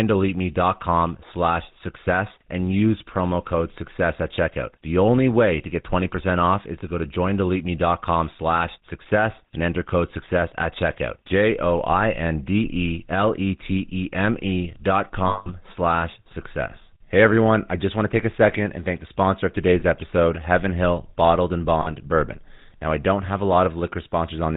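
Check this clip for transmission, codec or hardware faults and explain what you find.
Two faults are present: GSM full-rate coding across the whole clip, and three short dropouts of lost GSM frames.

GSM full-rate codec, throughout: the speech passed through the original GSM codec, which models the vocal tract and rebuilds the excitation from sparse regular pulses, sampling only every third value. The codec damage is plainly audible as a buzzy, gravelly roughness with nothing above 4 kHz, which fits the 13 kbps full-rate mode.

Lost GSM frames, at 15.28 to 15.49 s (just before "slash success"), 19.80 to 19.83 s (just after "thank the sponsor of"), and 21.82 to 21.87 s: when frames failed, the decoder reused the last good frame's parameters. Each gap becomes a rough metallic ring, longest at 180 ms in the first, which fits about nine consecutive frames.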